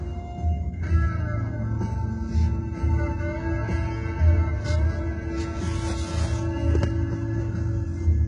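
HE-AAC compression runs throughout this recording of sounds, likely the cause of the heavily damaged, metallic-sounding treble that stops at 11 kHz, fitting a very low bitrate around 12 kbps.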